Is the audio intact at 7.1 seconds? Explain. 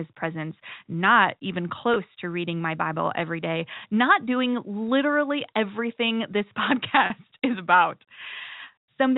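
No. A packet loss with pitch repetition runs from 7.06 to 7.10 s. About 40 ms of audio is missing, which fits two 20 ms packets. The receiver bridges the gap by repeating the last pitch period it received and fading it down. The gap is short, so there is no drop to silence. Instead the sound holds briefly on one slightly buzzy, static tone before the normal signal resumes.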